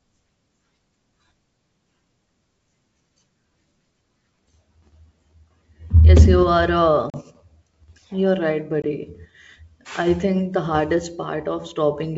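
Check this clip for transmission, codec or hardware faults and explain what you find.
There's one real fault here, packet loss on an ADPCM call, showing up twice. At 7.10 to 7.17 s about 40 ms drops out, roughly a couple of packets, and at 8.82 to 8.85 s another 20 ms goes. Each gap is a hard-edged silence. The decoder's predictor and step size lose track of the sender's during the gap, so the speech comes back slightly distorted before it settles. The wideband G.722 coding itself sounds clean.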